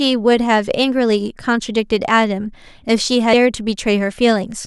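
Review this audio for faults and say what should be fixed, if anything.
At 3.32 s the speech jumps forward by about 150 ms. These are compressed frames skipped. Roughly seven frames of 23.2 ms were missing or rejected as damaged by the decoder. To prevent this, check file integrity after encoding and transfer, and re-encode from the source if frames are corrupt.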